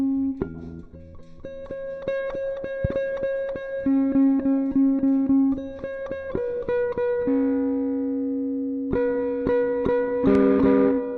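A loud pop at 2.85–2.87 s and another at 10.35–10.38 s jump well above the surrounding sound, likely from a voltage pulse. Unlike a dropout, the sound continues uninterrupted underneath.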